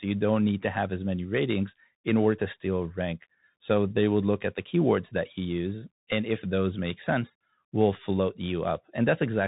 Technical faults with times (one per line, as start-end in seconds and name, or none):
0.00-9.48 Bluetooth CVSD headset codec